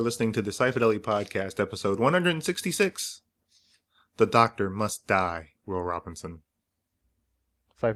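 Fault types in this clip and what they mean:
No audible faults turn up anywhere in this recording.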